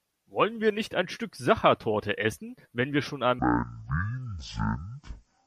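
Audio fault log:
3.39–5.47 s, section at the wrong speed: the speech turns deep and sluggish, about ten semitones lower at 0.53 times speed, likely from playback on the wrong clock.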